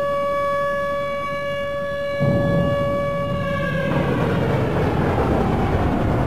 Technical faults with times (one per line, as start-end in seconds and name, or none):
none